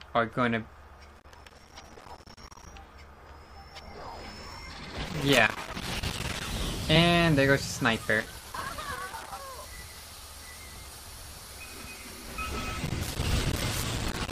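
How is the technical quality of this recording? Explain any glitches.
The recording has two kinds of technical fault: repeated bursts of crackle and three brief digital blips.

Irregular scratching crackle breaks out from 1.09 to 2.66 s, 5.08 to 6.46 s, 8.20 to 9.39 s and 12.86 to 14.31 s. This is loose connector crackle: a worn or dirty contact keeps making and breaking as it shifts, chopping the signal.

Short blips occur at 6.95 s, 9.92 s and 13.82 s, the last inside the final crackle burst. These come from damaged data in a compressed stream. Corrupted bytes make the decoder misread frames and lose sync, then skip ahead to the next valid header.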